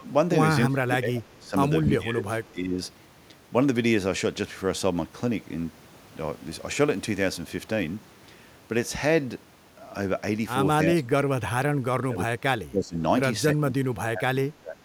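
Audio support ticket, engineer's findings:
Speech suppressed in double talk: speech dips about 15 to 30 dB at 0.00–0.07, 0.68–1.55, 1.87–2.78, 10.85–11.56, 12.06–12.33, 12.70–12.97 and 13.54–14.78 s. Likely the echo canceller's suppressor is ducking the near talker during overlap. The level drops.

Echo leak: a very faint delayed copy, about 35 dB down, at 2.45–2.52 s, lagging 276 ms. Likely residual loudspeaker echo that the far end's canceller missed. Fixed lag, not room reverb.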